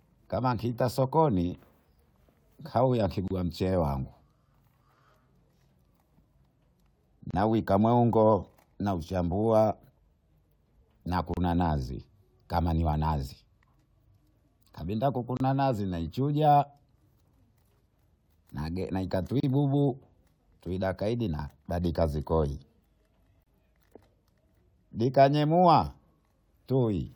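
Short dropouts hit the speech at 3.28, 7.31, 11.34, 15.37, 19.40 and 23.43 s, every 4 s. Each is a gap at a join of encoded pieces: 28 to 32 ms of untrimmed encoder padding. Speech resumes on "mongo nauchambua" and "nazi kama niwanazi" after the second and third.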